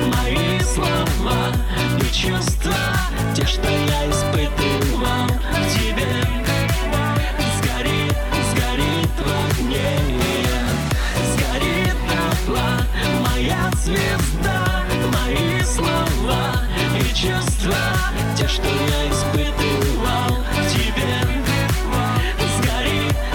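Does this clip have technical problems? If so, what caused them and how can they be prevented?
No, the signal shows no technical faults anywhere in the clip, so nothing needs preventing.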